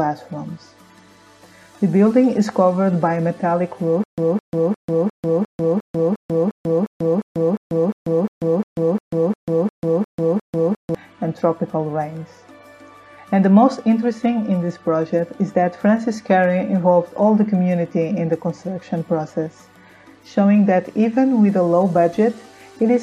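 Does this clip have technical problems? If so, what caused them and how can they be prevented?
Yes. From 4.04 to 10.95 s, a single 211 ms fragment repeats 19 times, each time followed by 142 ms of digital silence. This stutter with silent gaps pulses evenly every 353 ms. The likely cause is a stalled player or stream that replays its last buffered fragment at each retry and then runs dry, so the audio that should have played there is lost. Deeper buffering, and playback that handles underruns without looping stale data, would prevent it.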